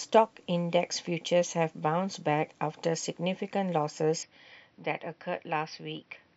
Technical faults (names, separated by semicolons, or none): input switched to a poorer device